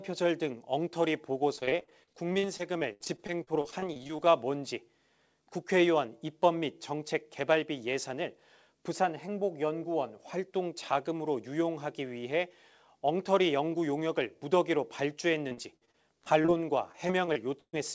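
From 1.56 to 4.32 s the speech breaks up with repeated packet loss, the robotic sound you get when packets keep going missing and each hole is papered over by stretching the last bit of audio. Roughly a quarter of that stretch is filled-in sound, with gaps up to 71 ms, so it comes across choppy, with pieces missing. It returns at 15.50 to 16.50 s (gaps up to 49 ms) and again at 16.92 to 17.75 s, where one 134 ms hole stands out. Throughout, nothing sits above 8 kHz, which fits a G.722 call path.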